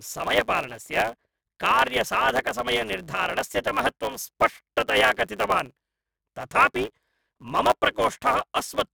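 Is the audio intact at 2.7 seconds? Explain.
No. At 2.7 seconds the speech carries a block size mismatch (truncated), present throughout the clip. Each block's tail is discarded where a longer-writing stage feeds a shorter-reading one, producing a 109 Hz buzz at the block rate and playback running 1.09 times fast with its timbre kept.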